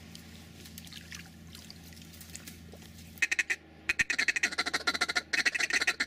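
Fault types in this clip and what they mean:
No technical faults are audible.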